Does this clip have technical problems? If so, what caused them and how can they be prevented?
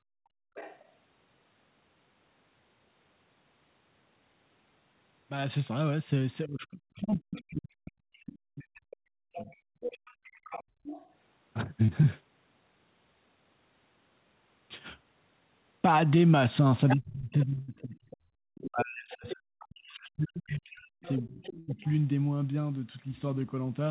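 Yes. Background gated by the echo canceller occurs from 0.0 to 0.55 s and again between 9.76 and 10.84 s. While the loudspeaker played, the canceller pulled the microphone down by about 38 dB and then about 28 dB. For roughly half a second at the start and a few brief moments later, the room sound drops out before returning. Prevention: use a gentler suppression setting or a headset so the canceller needs less attenuation.

The other side's voice leaks through at 0.55 to 0.88 s, 7.35 to 11.1 s, 16.88 to 20.09 s and 21.03 to 21.91 s. This is likely incomplete echo cancellation, which let loudspeaker sound back into the microphone. The leak sits well below the main speech, closest at around 10 dB down between 16.88 and 20.09 s. Prevention: lower loudspeaker volume, increase mic-to-speaker distance, or use headphones.

Speech is suppressed in double talk from 6.47 to 9.49 s and from 16.95 to 21.83 s. 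When both sides spoke, the canceller likely could not separate talker from echo, so the main speech dips by roughly 40 dB in places across about three and four seconds. Prevention: headphones remove the echo path, letting the canceller stay open during overlap.

Short concealed packet loss occurs at 7.1 s (35 ms) and between 11.85 and 11.9 s (48 ms). Each time, about 20 ms of audio arrived too late. The decoder extended the preceding sound to cover the gap, leaving a brief smear before blending back. Prevention: a steadier network or slightly deeper jitter buffer avoids late packets.

A burst of packet loss hits at 17.62 to 17.7 s and 21.6 to 21.7 s, with about 60 and 80 ms missing. The receiver held and faded the last sound into a decaying buzz or hiss, then resumed further on with that stretch gone. Prevention: use a wired connection and forward error correction to recover consecutive losses.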